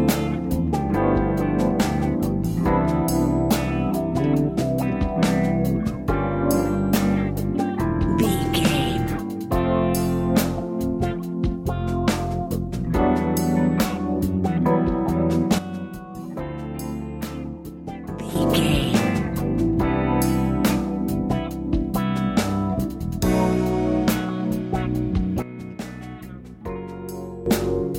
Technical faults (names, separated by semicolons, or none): sudden gain jump